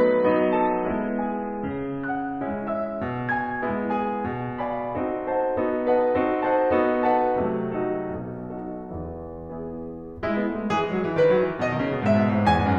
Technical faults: adaptive stream starting at a low bitrate

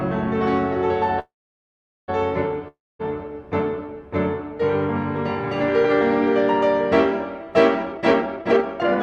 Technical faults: call audio freeze; long network dropout; jitter buffer speed-up

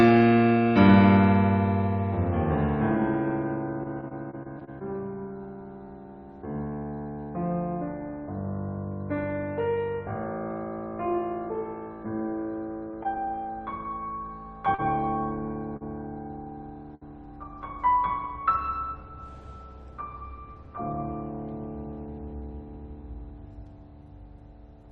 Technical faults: repeated packet loss (robotic sound); scattered short gaps

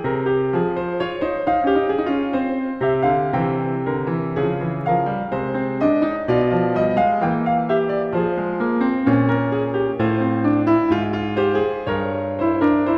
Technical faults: hard clipping

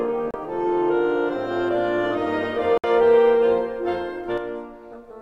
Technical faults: Bluetooth dropout; one channel drops out

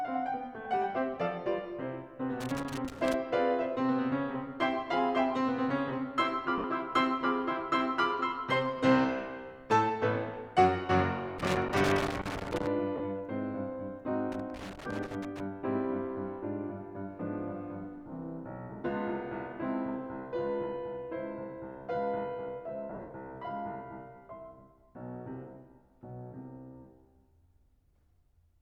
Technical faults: loose connector crackle; lost LE Audio frames

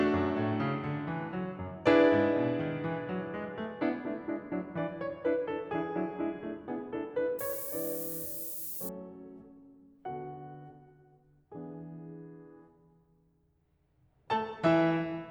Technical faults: low bit depth with noise shaping

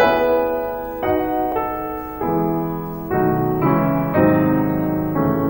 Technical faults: video or display buzz; overlap between stream segments

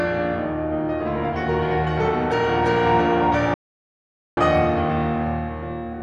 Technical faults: playback stall

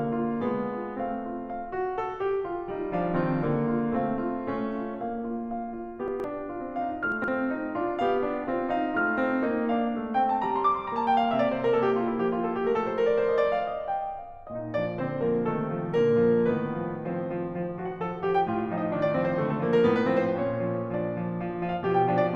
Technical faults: chunks out of order

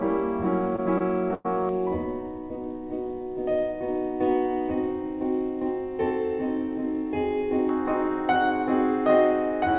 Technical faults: short concealed packet loss; burst of packet loss; channel delay (comb filtering)

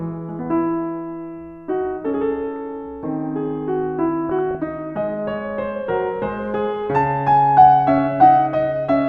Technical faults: DAB burbling

